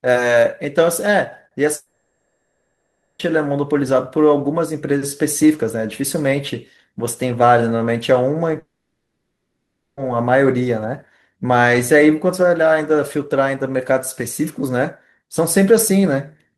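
From 1.75 to 3.22 s, a likely long network dropout cuts off about 1.4 s of the speech. The receiver stretches the last sound into a fading buzz, and the speech resumes with that stretch missing. What is likely the same break recurs from 8.59 to 10.00 s, where the fill ends in about 0.2 s of silence.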